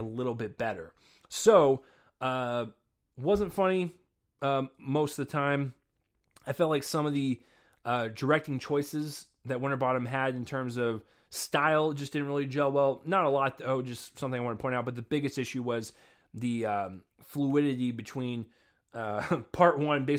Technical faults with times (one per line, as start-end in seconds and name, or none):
none